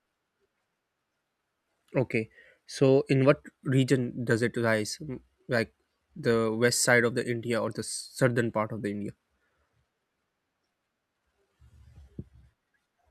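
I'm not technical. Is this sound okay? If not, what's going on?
Yes, nothing in this speech recording points to a technical problem with how the sound was captured, stored or played back.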